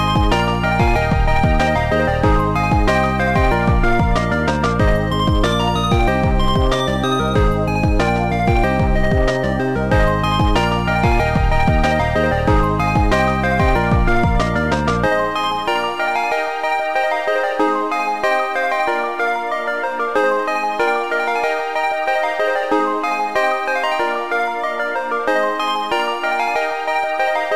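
Hard clipping runs through the whole clip. The signal is driven about 6 dB past what one stage can pass, so a small share of peaks are sliced flat. The result is brief crackle on loud moments, not the rounded, gradual thickening that soft saturation gives.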